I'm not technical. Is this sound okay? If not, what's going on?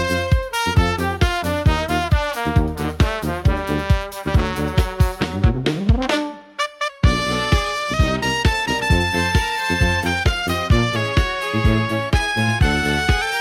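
No. From 6.89 to 7.94 s and again from 10.96 to 13.22 s, the sound slows by about 6% and drops about a semitone, then snaps back. This is a drift correction step, likely from clock-matching software briefly changing playback speed.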